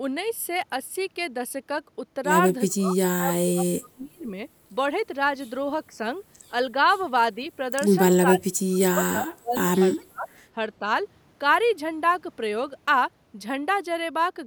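Speech suppressed in double talk pulls the speech down at 2.68–2.98, 3.18–4.36, 5.89–6.01, 7.35–7.49, 8.24–9.80, 10.06–10.28 and 10.79–10.86 s. The dips range from slight to about 30 dB, likely an echo canceller ducking during overlap.

Within the second dip, at 3.84–3.89 s, an echo leak adds a faint copy about 30 dB down and 399 ms late. It is likely loudspeaker echo that slipped past cancellation. Unlike reverberation, it is a distinct delayed repeat rather than a smooth tail.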